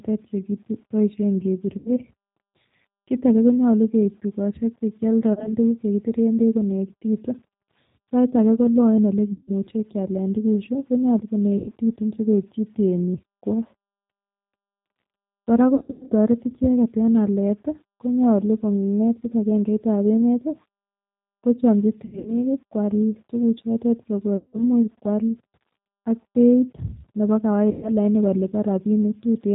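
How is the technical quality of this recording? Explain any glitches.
The quality is poor. Plainly audible low-bitrate codec coloring runs through the whole speech clip, and eight dropout glitches interrupt it.

The G.729 codec effect is present from start to finish. This is G.729A at 8 kbit/s. It rebuilds the voice from a vocal tract model and a few pulses. Nothing above 4 kHz survives. The speech sounds plainly rough, narrow and somewhat synthetic.

VoIP packet loss concealed by the speech codec occurs eight times: 1.78 to 1.93 s, 5.33 to 5.54 s, 9.32 to 9.51 s, and 11.58 to 11.73 s just after "kialen tukuchu konyolu". It occurs again at 15.75 to 16.14 s, 22.05 to 22.44 s just before "kwal tukuchotet", 24.37 to 24.64 s just after "kwal tukuchotet", and 27.71 to 27.89 s. The missing audio ranges from 40 ms to 260 ms. At 15.75 s, 260 ms is lost in pieces over 360 ms. At 22.05 s, 160 ms is lost over 200 ms. 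In both, the longest gap is 80 ms. The decoder fills each gap by repeating its last pitch and filter at falling gain. That gives a stretched, buzzy tone or coloured noise that fades. The voice stays weak or distorted briefly after each gap.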